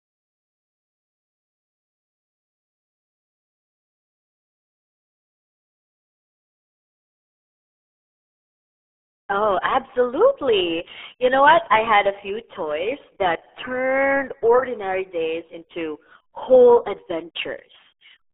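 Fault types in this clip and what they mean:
RealAudio 14.4 codec: The speech sounds like it went through RealAudio 1, the old 14.4 speech codec built for dial-up modems. It squeezes the signal down to about 8 kbit/s. Here the band is cut to a phone-like 300 Hz to 3.5 kHz, and nothing is left above 3.8 kHz. The damage is heavy and runs the whole clip. Voices come out muffled and gargly, with a watery, bubbling texture.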